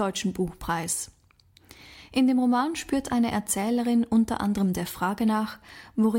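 Speech recording with no technical faults to report.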